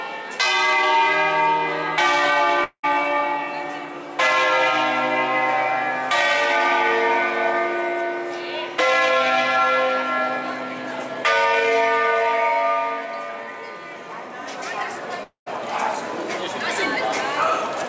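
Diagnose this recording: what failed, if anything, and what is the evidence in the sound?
The likely cause is a long network dropout, at 2.64–2.86 s and again at 15.23–15.49 s. Each time, the last sound gets stretched into a fading buzz, then goes quiet before the audio resumes with about 0.2 s and 0.24 s gone, all inside the call path's 8 kHz band.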